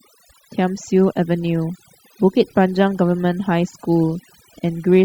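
Overdone noise removal runs through the whole clip, from start to finish. A noise reduction stage was pushed far too hard, so any frequency band that drifts near its idea of the noise floor gets pulled down or shut off completely. Soft, low-level parts of the speech fall under that threshold and vanish along with the noise. Between phrases the background collapses to near silence dotted with twinkling specks.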